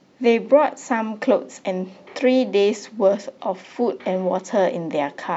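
Nothing in the speech recording points to a technical fault: level, continuity and timing hold steady throughout, with no event that needs a time or a cause.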